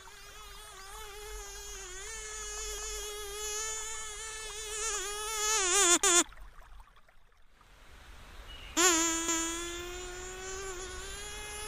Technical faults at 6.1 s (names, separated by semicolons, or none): overlapping chunks